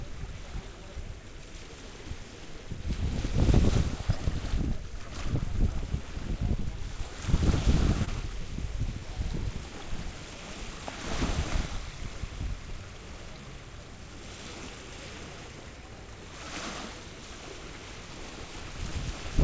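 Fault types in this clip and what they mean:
Clock drift between sender and receiver: The sending clock runs roughly one and a half percent slow against the receiving one. The jitter buffer keeps draining, so the receiver must stretch the sound to keep up. This shows as small, unevenly spaced timing hiccups across the clip.
Repeated timing corrections: From 1.0 to 6.6 s and again from 9.0 to 18.9 s, the receiver plays the audio at 98 percent speed. It adds roughly a tenth of a second, then about 0.15 s.
Short stall from a late packet: At 8.05 s a packet arrives late and the buffer runs empty. The last sound is held for 23 ms, then playback resumes from the same point with nothing lost. The hold, heard through a band limited to 8 kHz, is a slight buzz or dip.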